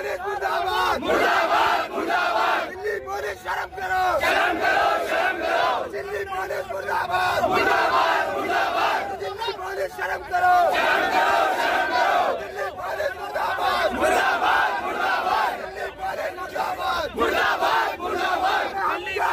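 No technical faults can be heard anywhere in the clip. Nothing in the audio points to a problem in how it was captured or passed along.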